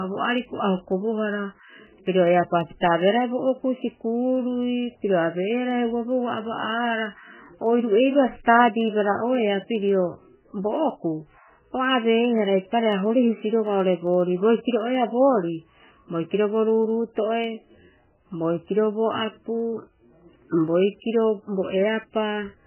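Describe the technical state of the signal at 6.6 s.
At 6.6 s the speech carries MP3 compression, as it does for the whole clip. The band stops dead at about 3 kHz and the remaining sound is watery and swirly, with smeared consonant attacks. This is likely an encoder starved of bits, which fits a very low bitrate around 8 kbps. It discards the treble above a fixed cutoff and drops weak frequency lines that then flicker on and off from frame to frame.

Clock slip clicks also run through 6.6 s, part of a steady series from 0.11 s to 22.63 s. Faint regular ticks, one roughly every 70 ms and some three hundred in all, sit under the louder parts of the sound. The likely cause is two devices on unsynchronised clocks that disagree by a few hundred parts per million. A single sample is dropped or repeated each time the drift adds up to a whole sample.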